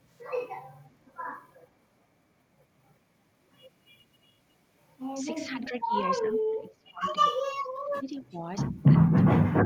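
Echo leak at 1.54 to 1.66 s: a faint, delayed copy of the speech, trailing it by 360 ms and sitting very low, around 35 dB down. It likely comes from a far-end echo canceller that let some loudspeaker pickup slip back into the call.

Speech suppressed in double talk at 5.47 to 5.94 s, 6.2 to 7.14 s, 7.31 to 7.35 s, 7.84 to 8.38 s, 8.99 to 9.04 s and 9.33 to 9.64 s: the speech repeatedly dips, from roughly 15 dB to as much as 40 dB in the last stretch, almost vanishing. This is likely an echo canceller mistaking overlapping talk for echo and turning both its own talker and the echo down.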